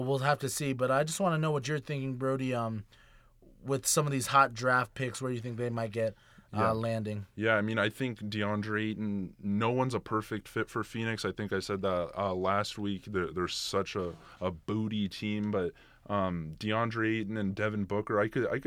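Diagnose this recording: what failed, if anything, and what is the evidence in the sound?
Speech jumps 5.5% fast and about a semitone sharp from 8.64 to 9.47 s, before "one's a perfect fit", then 5.5% slow and flat from 13.14 to 13.77 s. On a spectrogram, harmonics step up or down, then snap back. This is likely a drift correction step in buffer clock-matching.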